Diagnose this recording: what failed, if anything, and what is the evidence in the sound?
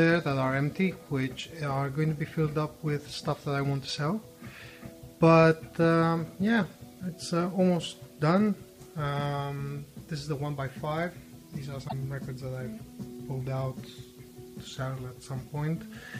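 Damaged data in a compressed stream, from 11.85 to 11.93 s. This is a codec-stage failure: for roughly 80 ms the sound breaks into a brief chirp, squawk, click or short hole that doesn't belong to the surrounding material. Corrupted bytes inside the compressed file meant the decoder could not read those frames as valid. It lost frame sync, produced garbage or nothing while scanning forward for the next good frame header, then resumed clean decoding once it found one.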